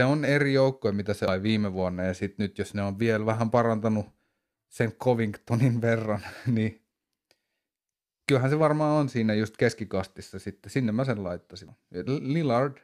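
At 1.28 s, between "eri joukkoja mitä se" and "viime vuonna ja sitten", the speech is broken by a brief glitch, the signature of damaged data in a compressed stream. Corrupted bytes leave the decoder misreading a frame, losing sync and hunting for the next valid header, so a short blip of garbage replaces the audio. The same fault recurs at 11.68 s, just after "mä sen", as another momentary glitch.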